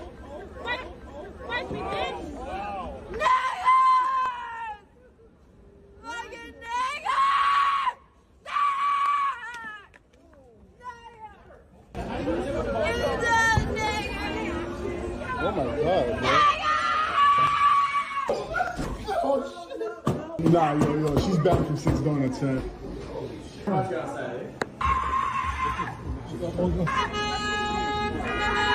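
From 0.65 s to 28.28 s there's a click every 1.2 s, around twenty in all, whenever sound is present. That steady rhythm suggests clock drift buffer slips, likely two devices a few hundred ppm apart, each slip dropping or repeating about 15 samples.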